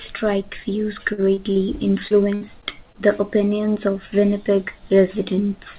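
Speech sent over a call path whose G.711 mu-law coding leaves nothing above 4 kHz suffers repeated packet loss (robotic sound) twice. From 1.13 to 1.67 s, four gaps up to 48 ms long are patched by extending the previous sound, covering about a quarter of that stretch. From 2.08 to 2.97 s, four more gaps up to 60 ms long do the same, making the speech choppy with pieces missing. Overlapping the second stretch, a jitter buffer slow-down from 2.64 to 3.40 s has the receiver repeat pitch periods to rebuild its reserve, adding 44 ms. That segment plays at 95% speed with unchanged pitch, so sounds there are slightly drawn out.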